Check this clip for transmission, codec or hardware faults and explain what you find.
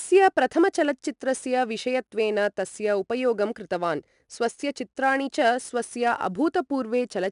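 One codec fault runs through the whole clip: 4-bit ADPCM compression. Each sample is coded as a coarse 4-bit step from a predicted value, with the step size adapting to the signal. The resulting quantisation error is a broadband noise that rises and falls with the speech, heard as a plainly audible gritty hiss riding on louder syllables. Nothing is present above 10.6 kHz, which fits a reduced sample rate and a stream of about 89 kbps.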